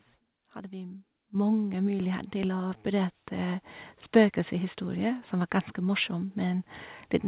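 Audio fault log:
1.35 s, microphone volume stepped up: the input level jumps by about 9 dB in a single step, and the speech and the background noise get louder together. That shared jump is the mark of automatic gain control raising the device's microphone volume. The waveform envelope widens abruptly at that instant. On a spectrogram, every band brightens at once, up to the 4 kHz ceiling of the narrowband call path, which fits G.711 mu-law coding.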